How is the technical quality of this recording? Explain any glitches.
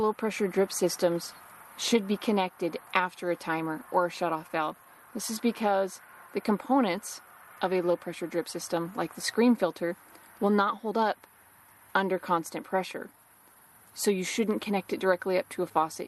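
The recording is marred by a steady run of small timing glitches rather than by any single loud defect.

Clock drift between sender and receiver: throughout, the sender's clock runs roughly 4 percent fast, so the receiver's jitter buffer keeps overfilling, producing a faintly uneven, hurried pace.

Repeated timing corrections: from 0.03 s to 16.08 s, the receiver trims short pieces to absorb the 104 percent rate, heard as slight, irregularly spaced hiccups in the flow.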